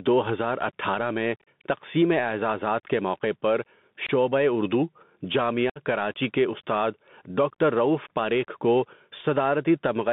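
Speech carried over a Bluetooth headset link shows three faults. The gain was likely set far too high with a fast limiter pulling it back, so the level swings by about 10 dB throughout, leaving the speech squashed and breathing. The link runs the Bluetooth CVSD headset codec, whose one-bit adaptive delta coding points to a 64 kbps stream and passes only about 150 Hz to 3.6 kHz. The result is a narrow, boxy voice, scratchy s sounds, a granular hiss underneath and distortion on loud, bright sounds that outrun the step size. On top of that comes unconcealed Bluetooth headset packet loss, where dropped voice packets were replaced by silence or an idle pattern with hard edges. From 1.37 to 1.48 s, 82.5 ms goes missing in scattered holes, the longest 37.5 ms, which sounds like a chopped, crackling burst. At 4.07 to 4.11 s, 22.5 ms is lost, and from 5.70 to 5.80 s another 60 ms drops out, each followed by a brief dip in level as the codec recovers.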